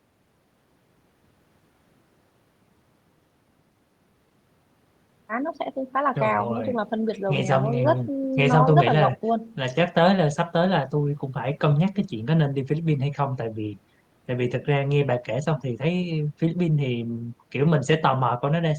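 No technical faults are audible.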